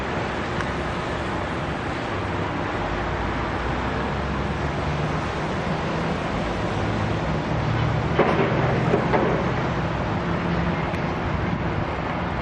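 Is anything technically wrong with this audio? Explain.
No, nothing technically wrong can be heard here.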